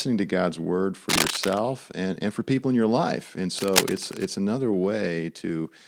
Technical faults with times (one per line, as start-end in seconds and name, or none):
1.09-1.59 cable scratch noise
3.58-4.27 cable scratch noise